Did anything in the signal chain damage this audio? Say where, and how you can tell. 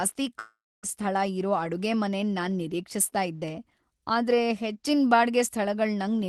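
Yes. Long network dropout, 0.39 to 0.86 s: a fading buzz, then silence before "ಸ್ಥಳ ಇರೋ ಅಡುಗೆಮನೆನ್ ನಾನ್", likely lost packets that the receiver papered over.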